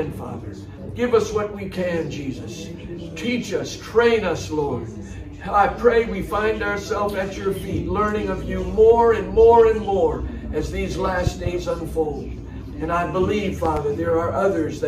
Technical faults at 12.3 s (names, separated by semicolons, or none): none